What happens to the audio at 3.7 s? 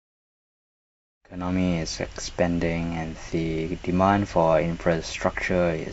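At 3.7 s the speech carries on intact, with no dropout, click, distortion or other fault at that moment.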